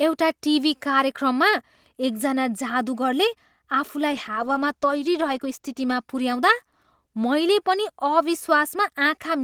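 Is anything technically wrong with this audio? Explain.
Yes. A call bitrate drop runs from 4.15 s to 7.77 s in this speech clip. The connection's bandwidth estimate fell, so the Opus encoder was forced to spend far fewer bits on each frame and quantise the signal more coarsely. The sound turns rough and watery, with dulled upper frequencies, most severely for about 1.3 s, before clarity returns. The degradation fits a bitrate falling from about 32 kbps to about 15 kbps.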